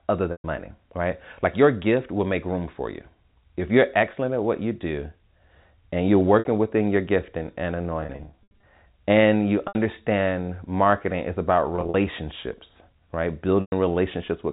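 Speech over a telephone-band G.711 line, and the trouble is packet loss with pitch repetition. The gaps get bridged by looping the last pitch period, so you hear brief held, buzzy stretches that fade into silence in the longer gaps: 0.32 to 0.44 s just before "money right", 6.39 s after "and you're", 8.01 to 8.63 s after "within your gifting and" (scattered dropouts over 620 ms), 9.68 s, 11.76 to 11.94 s (scattered), and 13.61 to 13.72 s.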